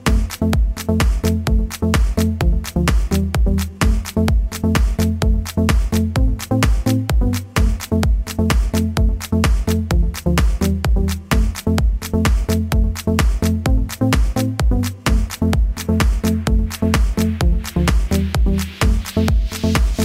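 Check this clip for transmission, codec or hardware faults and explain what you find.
There's one fault, and it runs the whole way through: sample clock jitter. The converter's clock wobbles by something like ten microseconds, so samples land early or late, and steep waveform slopes turn that timing error into a gritty hiss sitting roughly 25 dB under the signal, loudest on bright, loud passages and gone in silence.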